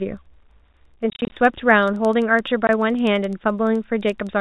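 All the way through there's a soft buzz at about 11.7 Hz: a filter restarted on every block, ticking from silence each time, which fits 2048-sample blocks. From 1.10 to 1.32 s, packet loss filled with silence chops the speech, about 130 ms of holes scattered over 220 ms, runs up to 30 ms, suggesting 10 ms packets. It happens again briefly, a 20 ms gap at 2.67 to 2.69 s. The narrow G.711 telephone band underneath is just the format doing its job.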